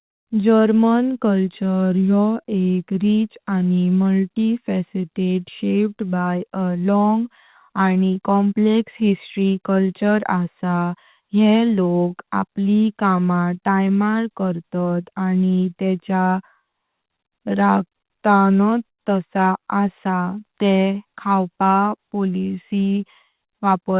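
From the start of the speech to the end, the recording shows clock drift between sender and receiver. The sender's clock runs about 4 percent slow, so the receiver's jitter buffer keeps running short and never settles. The timing sounds slightly uneven rather than broken. On a spectrogram the drift has no mark of its own. It shows only through the corrections it forces, which are spread across the whole file.

Those repeated timing corrections run from 0.05 s to 23.95 s. The receiver pads the stream with small repeated pieces, so the speech plays at about 96 percent speed and ends up roughly a second longer than it should be. Each insertion is tiny and all of them go the same way, but they are spaced unevenly. The result is a faintly dragging, unsteady tempo with occasional hiccups. On the waveform, short stretches repeat at irregular points. On the spectrogram, harmonics briefly hold flat at those joins.

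Between 3.91 s and 7.65 s there are scattered short gaps, about four of them. Each is tiny, the longest around 10 ms, and all together they come to roughly 30 ms. The receiver covered every hole by extending the sound just before it, so what you hear is a brief tick or smear, not silence. On the spectrogram each one appears as a thin vertical seam where the partials stretch unnaturally. The whole band sits below 4 kHz, which fits the G.711 mu-law call path.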